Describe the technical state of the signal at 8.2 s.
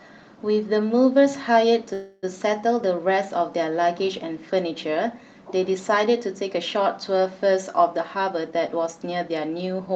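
At 8.2 s the speech is inside a jitter buffer speed-up that runs from 7.97 s to 9.88 s. After delayed packets arrived together, the receiver's buffer held more audio than its target, so it drained the excess by repeatedly cutting short segments of one or a few pitch periods. Playback runs at about 111% speed, removing roughly a fifth of a second in total. Pitch stays unchanged, but delivery sounds noticeably hurried.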